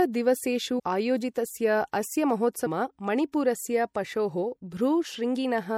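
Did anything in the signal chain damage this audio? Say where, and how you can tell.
Yes, two stages did. The whole clip sounds watery and dulled, with the top end shaved off and a swirly, smeared quality on the speech. That's codec damage, likely MP3 compression at a low bitrate, somewhere around 64 kbps, starving the quieter frequency content.

Then there are two compressed frames skipped events, at 0.78 s and 2.65 s, where the audio jumps ahead with a brief smeared blip rather than a click. The first loses about a tenth of a second and the second roughly seven tenths, consistent with whole 24 ms frames missing or rejected by the decoder.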